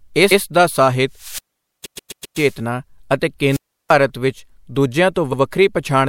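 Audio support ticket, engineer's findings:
Repeated frames: compressed frames duplicated in the stream or file, so the decoder replays the same stretch. Audible stutter. 0.30–0.41 s, a 104 ms block played twice just before "ਦਾ ਸਾਹਿਤ". 1.84–2.37 s, a 131 ms block played five times in total, adding 0.52 s. 5.32–5.40 s, a 78 ms block played twice.

Wireless microphone squelch dropout: the FM radio link from the mic fades and the receiver's squelch mutes the output. Heard as a rise in hiss or static, then near-silence, then the signal returns. 1.13–2.58 s, right after "ਦਾ ਸਾਹਿਤ", with a mute of about 460 ms. 3.49–3.95 s, with a mute of about 340 ms.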